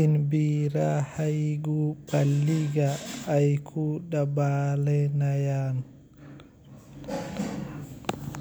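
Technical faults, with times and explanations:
No technical faults heard.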